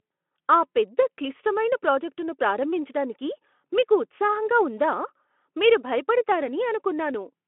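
No technical fault can be heard in the speech, which carries the narrow telephone-style band of a Speex codec path, running from about 250 Hz to 3.4 kHz.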